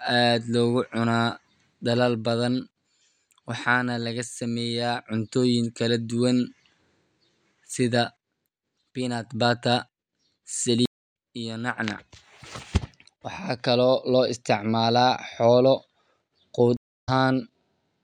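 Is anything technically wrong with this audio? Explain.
Yes. There are two stream reconnects in this speech. The first runs from 10.86 to 11.13 s, with about 0.27 s of silence. The second runs from 16.77 to 17.09 s, with about 0.29 s of silence. Each time the connection dropped and the player restarted its decoder mid-stream. The sound cuts out abruptly. It then picks up at a later point, skipping roughly 0.3 s of speech the first time and roughly 0.2 s the second.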